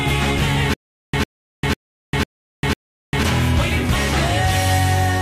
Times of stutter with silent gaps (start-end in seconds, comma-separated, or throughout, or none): 0.74-3.23